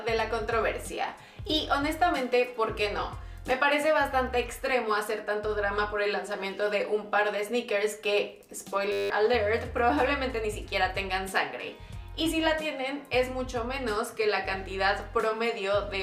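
A system hang loop occurs from 8.92 to 9.1 s. The computer stalled while the sound hardware kept replaying one 10 ms stretch of its buffer. The audio becomes a steady 100 Hz buzz, and about a fifth of a second of sound is lost.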